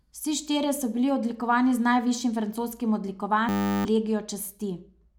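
Right after "odlikovani z najvišjim francoskim", from 3.49 to 3.85 s, a system hang loop: the system froze, replaying one 10 ms buffer as a steady 100 Hz buzz.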